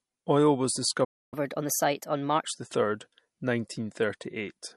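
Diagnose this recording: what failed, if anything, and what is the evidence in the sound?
The codec stage shows throughout the speech. The sound is plainly watery, with sibilants breaking into chirps. This is likely MP3 compression at a low bitrate, around 48 kbps. Short of bits, the encoder drops weak frequency lines, which flicker on and off between frames and show as speckled holes in the spectrogram.

At the playback stage the audio cuts out from 1.04 s to 1.34 s, about 0.28 s of silence in the middle of the flow. On a waveform this is a flat gap with abrupt edges, and on a spectrogram a blank vertical band. The cause is likely a playback stall: the player either ran dry of data or had its output thread blocked, and it produced nothing until it recovered.

Also at the playback stage, from 1.34 s to 2.45 s the speech runs at 1.25 times normal speed, and the pitch rises by about four semitones. 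This is catch-up at higher speed. The player resamples its backlog to win back the time lost in the stall. On a spectrogram the harmonics shift upward and sit further apart through that span. On a waveform the syllables appear compressed in time.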